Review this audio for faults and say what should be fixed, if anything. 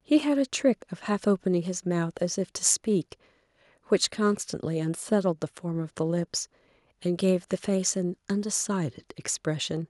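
No faults found in the speech recording, so nothing needs fixing.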